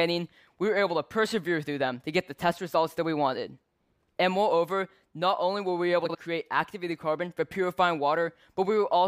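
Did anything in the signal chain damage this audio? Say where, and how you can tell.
Yes. Frames out of order at 6.05 to 6.16 s point to the network or storage stage. Two neighbouring blocks of about 46.4 ms were swapped and decoded in that order, so the stretch plays with its halves exchanged and no time is lost. It sounds like a brief garbled flutter. Each block is two frames.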